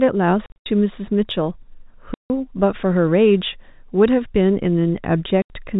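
Packet loss filled with silence cuts holes at 0.46 to 0.66 s (scattered, longest gap 80 ms), 2.14 to 2.3 s and 5.42 to 5.5 s. Missing packets become digital silence: flat waveform gaps and blank spectrogram columns with hard vertical edges, fitting 20 ms packets.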